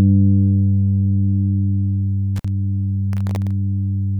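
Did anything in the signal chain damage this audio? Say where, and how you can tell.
Yes. An intermittent contact in the analogue wiring breaks the sound from 2.36 to 2.48 s. The signal cuts out for about 51 ms with crackle at each edge, which is what happens when a loose plug or cable briefly opens the circuit.

Processor overload crackle appears from 3.13 to 3.51 s, at the driver and buffer stage. Around ten tiny silent gaps with hard edges run together into a gritty burst. This fits buffers of under a millisecond repeatedly missing their deadlines while the processor was overloaded.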